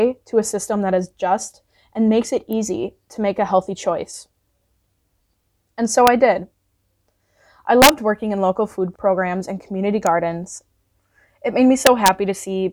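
A sharp snap at 2.53 s sits on top of the speech, an electrical switching spike, likely a nearby switch or discharge arcing into the line. At 6.07 s, between "and so" and "I did", a brief violent crack marks integer overflow, where a peak just past the limit wrapped to the opposite sign instead of clipping. A longer burst of cracking runs from 7.82 to 7.89 s, just before "working in local food", where peaks pushed about 4 dB past the limit and flipped repeatedly. Another switching spike snaps at 10.07 s after "food programs and community". From 11.87 to 12.08 s, overflow cracks return as peaks exceed the limit by about 1 dB.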